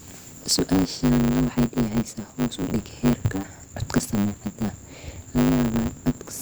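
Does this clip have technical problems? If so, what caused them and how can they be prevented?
Yes. The speech has a block size mismatch (truncated) running through the whole clip. A steady buzz at 100 Hz sits under the sound, and delivery runs about 1.16 times too fast while pitch stays near normal. One stage is writing longer blocks than the next stage reads, which fits 512-sample blocks, so each block's tail is discarded and the cuts repeat at the block rate. To prevent it, configure both stages to use the same block size.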